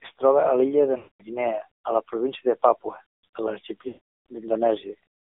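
Throughout, the speech carries the AMR narrowband mobile codec sound: the band runs from about 250 Hz to 3.6 kHz with nothing above 4 kHz, and the buzzy, synthetic texture of a low-rate vocal-tract model is plainly audible, which fits AMR-NB at 7.4 kbps.

At 0.98 s, just after "troba a l'illa de", lost AMR speech frames cut in until 1.23 s. The decoder repeats its last good pitch and vocal-tract settings at falling gain, so the sound smears and fades to silence within 0.1 to 0.2 s of a gap lasting about 220 ms, consistent with 11 missing 20 ms frames. A longer run follows from 3.88 to 4.19 s, about 380 ms or roughly 19 frames, with the same stretched decay into silence before speech resumes weakly.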